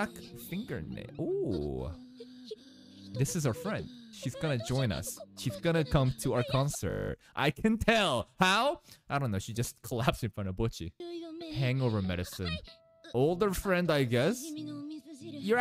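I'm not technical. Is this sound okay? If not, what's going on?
No. From 6.9 to 7.1 seconds there is a system hang loop. The computer or its audio driver briefly froze. The sound hardware kept replaying the last tiny piece it had, a 20 ms slice, ten times over. Because that slice is so short, the repeats blur into a steady buzz at 50 per second. When the system recovers, the sound carries on with essentially nothing missing.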